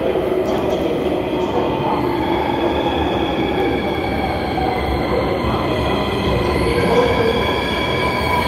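A recording of everyday sounds with no technical fault to be heard anywhere in it. There is nothing here that calls for a time or a cause.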